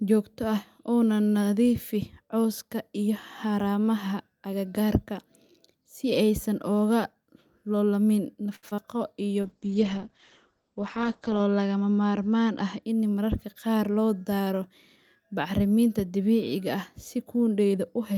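A short stall from a late packet at 8.55 to 8.65 s opens a burst of network trouble in this speech recording. A packet arrived after it was due, the jitter buffer emptied, and the receiver held the last sound for about 74 ms before resuming from exactly where it stopped. Nothing is lost, but that moment is drawn out unnaturally, with a slight buzz or dip, and the playback delay grows by the same 74 ms. Short concealed packet loss follows twice, at 8.69 to 8.73 s and again at 8.75 to 8.80 s. Each time about 40 ms of audio never reached the decoder, and the receiver bridged the gap with about 25 ms of extrapolated sound, continuing the pitch of voiced parts or shaped noise for unvoiced ones before crossfading back. The result is a quick smear or wobble, and a brief consonant can disappear inside it. The second gap also trims roughly 15 ms off the delay. A jitter buffer slow-down runs from 8.94 to 9.34 s as the receiver rebuilds its reserve by repeating single pitch periods and slivers of pause many times over. 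About 38 ms is added, so the speech plays at 92 percent speed without any change of pitch, sounding slightly stretched. A call bitrate drop spans 9.42 to 12.89 s. The audio turns rough and watery, and the top end vanishes as the bandwidth falls from 20 kHz to 8 kHz. This fits the bandwidth estimate collapsing and Opus being pushed from around 64 kbps down to about 9 kbps, where it sits for roughly 2 s before recovering. A jitter buffer speed-up from 12.62 to 13.75 s overlaps the end of that drop. Having accumulated more audio than it targets, the receiver repeatedly cuts out one or a few pitch periods, removing around 70 ms in total. The speech runs at 106 percent speed at unchanged pitch and sounds a little hurried.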